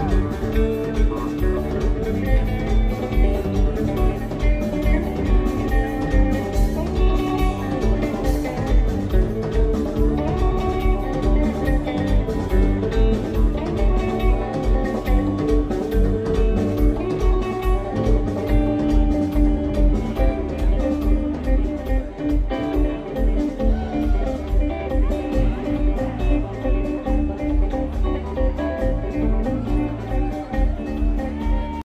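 No technical faults are audible.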